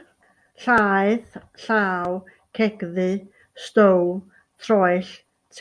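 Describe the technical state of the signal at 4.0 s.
At 4.0 s the speech signal is intact, with no audible fault at that point.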